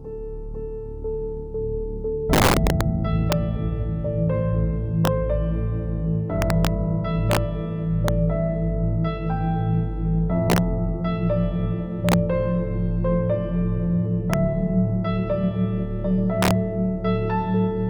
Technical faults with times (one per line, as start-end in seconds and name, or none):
0.00-17.89 integer overflow